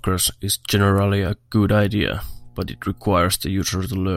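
From 1.57 to 3.07 s there's mains hum, a steady 60 Hz buzz under the speech, sitting roughly 30 dB down, probably from a ground loop picking up the power line.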